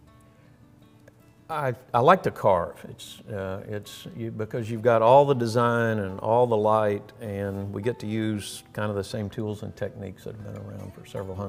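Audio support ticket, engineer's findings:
No faults found on playback.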